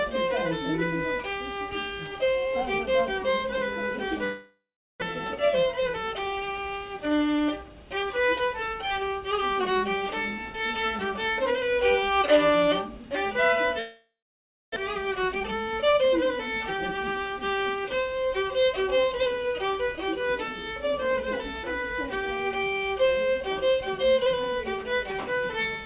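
At 4.24 s the sound smears into a fading buzz, then falls silent for about 0.39 s before returning at 5.04 s with a stretch gone. This is a long network dropout, likely caused by packets not arriving. The receiver stretched the last audio over roughly 0.78 s to cover it, and about 0.6 s of sound was never played. From 5.12 to 6.74 s the audio sounds hurried but keeps its pitch, running at 109% speed. This is a jitter buffer speed-up: the delayed audio had piled up, so the receiver trimmed many short pitch-period pieces, around 150 ms in all, to bring the delay back down. The same pattern repeats. A second dropout runs from 13.79 to 14.78 s, with about 0.61 s of silence after the fading fill, and again 0.6 s is lost. A faster speed-up follows from 15.04 to 17.38 s at 114%, removing around 300 ms. All of this is heard through a narrowband call path that carries nothing above 4 kHz.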